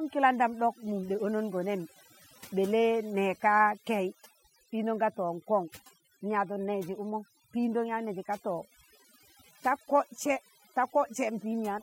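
From start to finish, the speech suffers overdone noise removal. Bands near the noise floor are cut hard, leaving twinkling near-silence between phrases.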